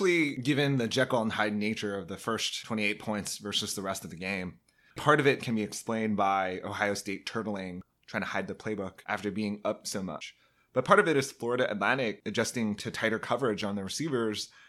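At 13.62 s, right after "adjusting to tighter coverage", the speech drops into a block of digital silence about 5.3 ms long. The output briefly went silent, which fits a 256-sample buffer that wasn't filled in time. The cut has no fade in or out, so the hole is too short to hear and comes across as a tick or dip. A flat floor with hard edges sets it apart from a fading level dip.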